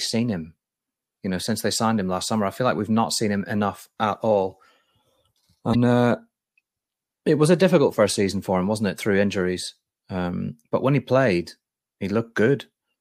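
A speech recording with one brief blip from 5.71 to 5.75 s, about 44 ms long. It comes from damaged data in the compressed stream: a stretch of corrupted bytes made the decoder misread those frames and lose sync until it found the next valid frame header.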